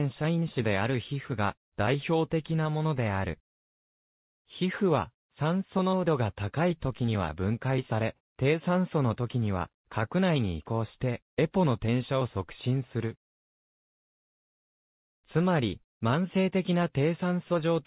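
The audio arrives through a WebRTC call path using the G.711 mu-law codec at 64 kbps, so the band stops at about 4 kHz, with no technical faults to be heard anywhere in the clip.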